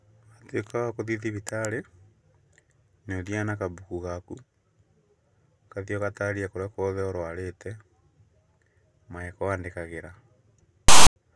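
At 10.88 s, file tags played as audio cut in: text metadata decoded as samples gives a harsh, one-sided rasp with abrupt edges, then flat silence from zero padding until 11.16 s. Unlike clipping or codec glitches, it is unrelated to the speech underneath.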